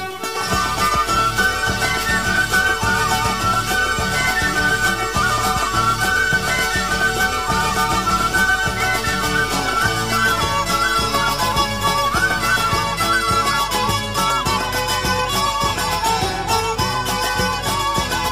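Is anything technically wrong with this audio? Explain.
Yes. From 0 to 12.82 s there is a stuck bit. One data bit is likely held fixed, so about half the samples shift by a step of roughly -35 dBFS, following the waveform. The result is harsh, buzzy distortion, and quiet gaps fill with noise.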